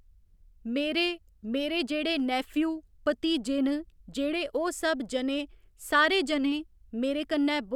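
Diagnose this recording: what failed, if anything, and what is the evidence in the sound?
Converter sample clock jitter: timing wobble of roughly half a microsecond adds hiss, about 45 dB down, following loud speech; spectrogram haze vanishes in pauses.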